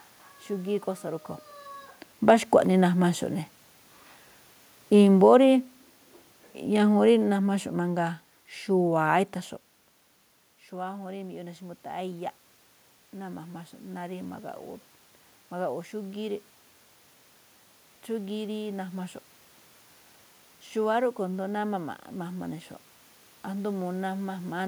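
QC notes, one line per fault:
2.6 to 9.32 s, automatic gain falling: the AGC decides the input is too loud, or its background noise too strong, and eases its gain down by about 8 dB over those seven seconds. You can tell it's the gain stage and not the talker because the room noise sinks right along with the voice. The level shifts around 1 s and around 10 s are just the talker moving relative to the mic.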